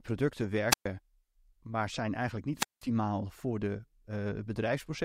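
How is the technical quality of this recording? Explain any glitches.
The speech is interrupted twice by wireless microphone squelch dropout, from 0.70 to 0.86 s and from 2.55 to 2.85 s. Each time, the FM radio signal fades, hiss rises briefly, and the receiver's squelch mutes the output for about 0.12 s and then 0.19 s before the speech returns.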